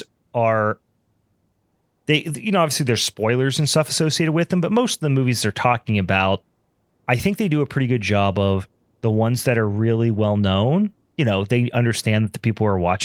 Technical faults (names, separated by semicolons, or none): none